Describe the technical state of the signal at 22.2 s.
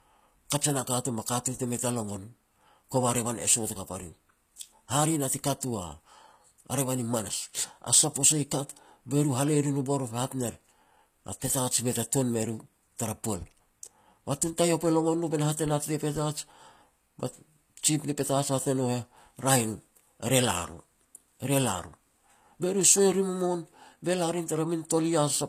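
At 22.2 s, like everywhere else in the clip, you're hearing low-bitrate audio saved at a high bitrate. The speech is likely a lean HE-AAC encode re-saved as high-rate MP3, so the smeared, swirly artefacts and the hard cut-off near 14.9 kHz persist.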